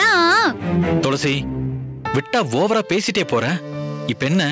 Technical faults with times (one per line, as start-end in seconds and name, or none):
0.00-4.52 gain pumping